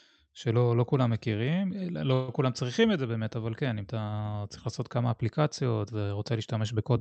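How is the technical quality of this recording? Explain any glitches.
One glitch stands out, a call audio freeze heard through the band-limited sound of a call codec with nothing above 8 kHz. From 2.13 to 2.30 s the sound stalls into a fading buzz for about 150 ms, then resumes where it stopped. Likely the packets arrived late and the jitter buffer ran dry, so the receiver stretched the last sound, inserting a gap while dropping nothing.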